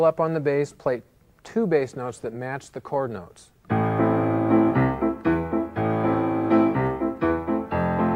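No technical fault can be heard anywhere in this audio. Nothing in the sound points to a problem with how it was captured, carried or played back.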